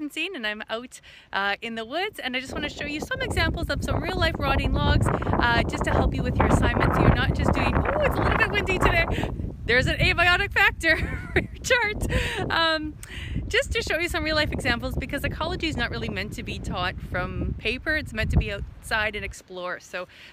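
No technical faults are audible.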